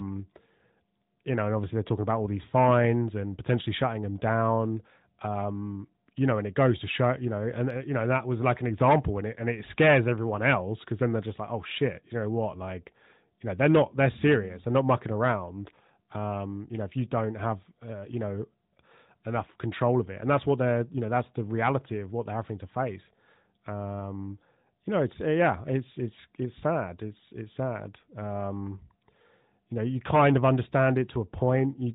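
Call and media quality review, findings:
No faults found: the speech is band-limited to 4 kHz by the AMR narrowband mobile codec, with only light coding texture consistent with its 12.2 kbps mode, and no dropouts, clipping or timing defects anywhere in the signal.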